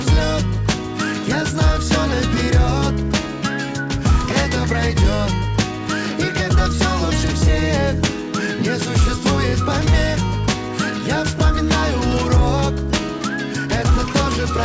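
No technical faults are audible.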